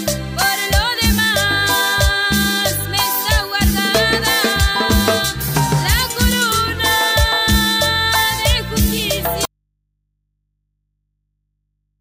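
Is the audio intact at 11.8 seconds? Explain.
No. At 11.8 s the clip is inside an audio dropout to a faint residue that begins abruptly at 9.45 s and lasts to the end. Only mains hum remains, around 55 dB below the signal, likely because the source was lost while the input stayed live.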